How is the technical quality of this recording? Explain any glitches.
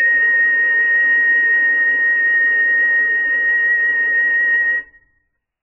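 Pretty rough, honestly. The music has one serious problem running the whole way through.

From start to finish there's heavy MP3 compression, likely at a very starved bitrate, around 8 kbps. Short of bits, the encoder chops off everything above 2.9 kHz and drops weaker frequency components, so the sound is dull and muffled, with a watery, swirly shimmer as detail flickers in and out.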